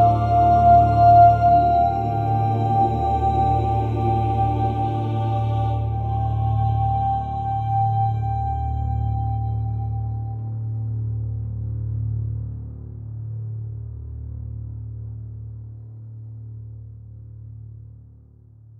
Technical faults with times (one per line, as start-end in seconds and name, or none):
none